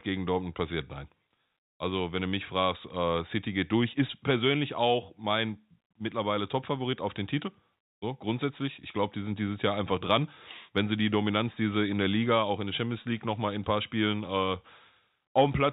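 No technical faults are audible.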